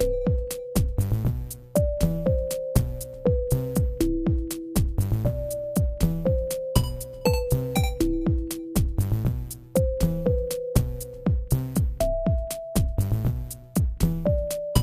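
Nothing stood out as technically wrong on listening to this recording of sounds.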